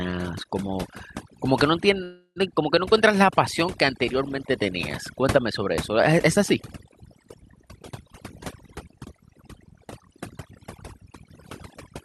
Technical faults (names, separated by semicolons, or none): overdone noise removal; call audio freeze; jitter buffer speed-up